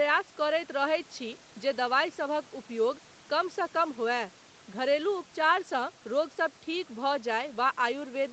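No technical faults occur anywhere in this speech.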